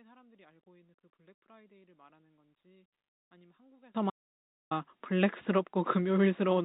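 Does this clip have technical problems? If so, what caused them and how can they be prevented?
Yes. From 0 to 3.95 s the speech drops about 29 dB and sounds faint, likely one channel inverted, so the shared centre cancels when summed to mono. Check polarity on each channel before any mono fold-down.

Then from 4.10 to 4.71 s, roughly 0.61 s, the audio cuts to dead silence, likely an audio dropout where the input link failed and silence was written. Secure cables and connections and watch input status while recording.

The call path's cap at 4 kHz fits G.711 mu-law and is expected.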